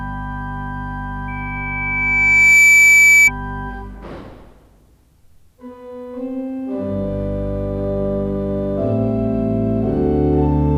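At 1.28 s a loudspeaker feedback squeal kicks in: a steady 2.3 kHz tone swells over roughly a second and a half until it's around 10 dB above the sound itself. The mic is hearing its own speaker and the loop runs away at that frequency until it cuts out at 3.31 s.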